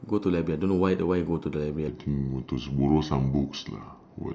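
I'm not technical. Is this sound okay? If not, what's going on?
No. From 1.88 s to the end at 4.34 s, there's a section at the wrong speed. The recording was most likely played back against the wrong clock, so that stretch runs at about 0.82 times its proper speed. Because speed and pitch are tied together, the speech suddenly drags and drops deeper, by roughly four semitones, sounding slower and lower than the first part of the clip.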